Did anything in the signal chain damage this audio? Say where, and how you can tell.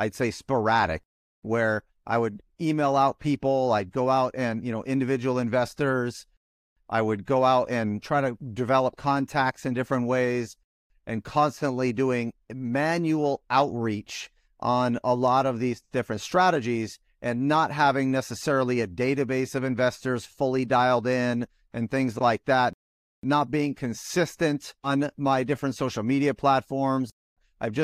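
No, nothing in the signal chain damaged this speech recording. No stage, from capture through to playback, leaves an audible mark anywhere in it.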